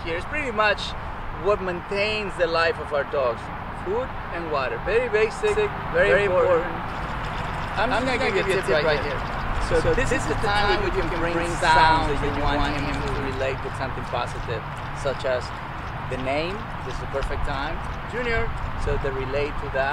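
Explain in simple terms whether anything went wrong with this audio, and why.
A doubled audio track runs from about 5.5 to 13.3 seconds. For that stretch, a second copy of the same sound plays roughly 150 milliseconds behind the first, about as loud, so everything seems to echo itself with a slap-back. The copy has no fading tail or room sound, and it switches on and off abruptly. This likely happened because the audio was captured twice, once through a slower path, and both were mixed together.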